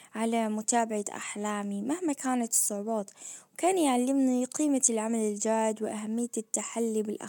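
No technical faults are audible.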